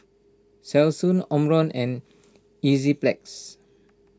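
A short bit of speech, and nothing technically wrong turns up in it anywhere.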